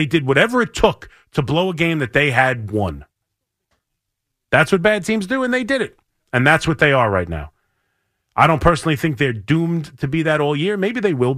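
A brief crackle roughens the speech peaks from 8.41 to 8.68 s, just before "think they're doomed to". This is hard clipping: the signal overshoots the stage's limit by about 1 dB, so its peaks are sliced flat, adding high harmonics heard as crackle.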